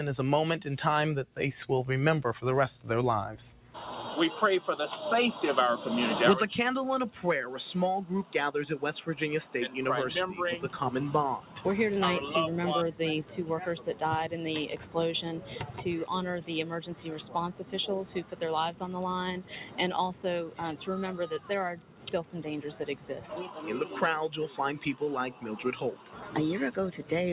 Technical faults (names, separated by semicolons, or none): noise suppressor applied to music or sounds; sound cut by the noise suppressor